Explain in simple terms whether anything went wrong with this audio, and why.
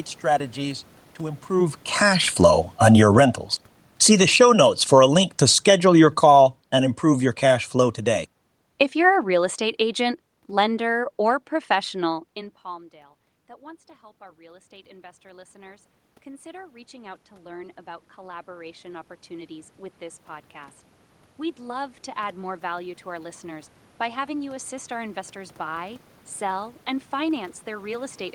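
Two things went wrong, both from the microphone's level control overreacting. Right after "strategies to", around 1.5 s, the speaker moves. Automatic gain falling follows: from 1.51 to 11.97 s the system slowly turns everything down, voice and room noise sinking together.

Around 12 s the speaker moves back, and automatic gain rising takes over from 12.35 to 26.05 s, ending just before "sell and". Voice and background gradually swell back up together.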